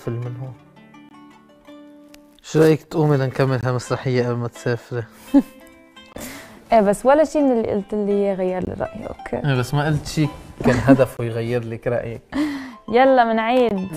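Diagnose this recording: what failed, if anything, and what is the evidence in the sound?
A gap between chunks is failing at the chunking stage, in storage or playback. Hard-edged silent holes of 20 ms appear at 1.09, 3.61, 6.13, 8.65, 11.17 and 13.69 s, one every 2.52 s. This fits 2.5 s chunks, each followed by 20 ms of inserted silence from padding or a late chunk start. Nothing is lost, only pushed later. The waveform shows abrupt flat-line notches, and the spectrogram shows thin full-height vertical blank stripes at a steady spacing.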